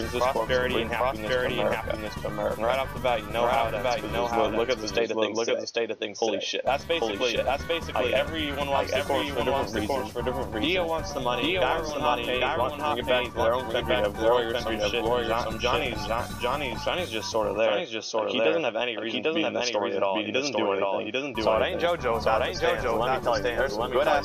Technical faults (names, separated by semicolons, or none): doubled audio track